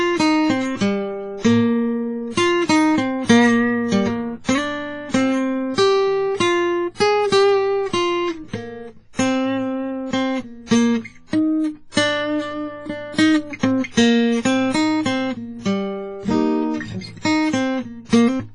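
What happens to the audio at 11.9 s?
At 11.92 s a pre-echo appears, lasting until about 11.97 s. A short hiss rises just before a sharp attack in the music, so the hit sounds softened and smeared. The transform codec spreads its noise across a whole block, and here the noise spreads over about 51 ms. The loud attack sits late in that block. The noise meant to hide it leaks into the quiet moment before it.

The whole clip sounds ringing and washy, with a hiss that swells and fades with the music. Nothing is heard above 10.4 kHz. The damage is heavy. The likely cause is WMA compression at a low rate, which fits a bitrate around 24 kbps. The encoder's long blocks spread quantisation noise over tens of milliseconds. At this rate, weaker parts of the spectrum are dropped entirely. That is also why the pre-echo spreads so widely.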